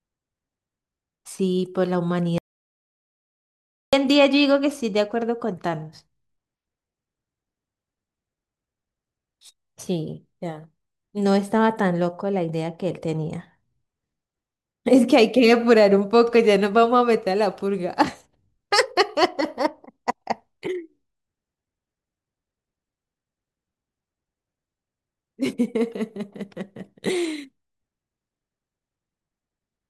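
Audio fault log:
2.38 to 3.93 s, audio dropout to silence. The speech cuts off mid-flow and the track falls to silence for about 1.55 s. No room tone or hiss remains in the gap, so it is dead silence rather than a quiet passage. The speech then resumes abruptly. Whatever was said in that stretch is missing. The likely cause is a brief loss of the input, such as a dropped link or momentary mute, while recording continued.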